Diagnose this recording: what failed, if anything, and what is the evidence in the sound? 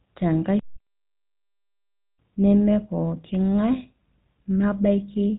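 The codec stage applies the GSM full-rate codec to the whole clip. Nothing above 4 kHz survives. The speech has a plainly audible buzzy, gravelly roughness. That fits a 13 kbps GSM encoder, which rebuilds the voice from a vocal-tract model driven by sparse pulses.

From 0.94 to 1.44 s the speech turns into a rigid, metallic buzz at 50 Hz. It still loosely tracks the speech. The likely cause is robotic sound from repeated short buffers at the driver or buffer stage. Audio arrived too seldom, so a 20 ms block was replayed over and over, replacing most of the real signal.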